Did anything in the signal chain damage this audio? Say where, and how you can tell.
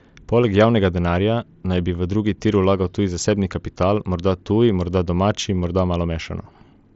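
No, nothing in the chain damaged this speech; it came through the Bluetooth mSBC headset codec as you'd expect, with the top end stopping around 7.7 kHz as that wideband link allows.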